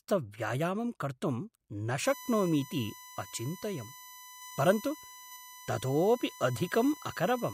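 USB whine from 2.05 s to the end: a steady 1 kHz tone, roughly 20 dB below the speech, as the bus's 1 ms frame current leaks through power or ground.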